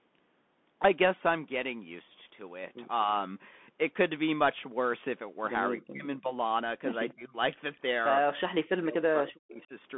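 Bluetooth CVSD headset codec damage runs through the whole speech recording: nothing passes above 3.8 kHz, and the one-bit up/down coding, which fits a 64 kbps link, leaves scratchy sibilants and a granular hiss. Speech suppressed in double talk appears at 5.77–6.30 s, 7.12–7.36 s and 8.65–9.72 s, where the voice dips by roughly 20 to 40 dB or drops out, likely because an echo canceller pulled down both sides while they overlapped. An echo leak appears at 7.10 s, 7.75 s and 9.54–9.64 s as faint copies trailing the voice by 244 ms, likely residue the far-end canceller failed to remove.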